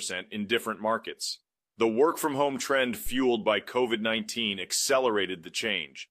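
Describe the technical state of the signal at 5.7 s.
Nothing is wrong with the signal at 5.7 s; the speech passes through intact at that moment.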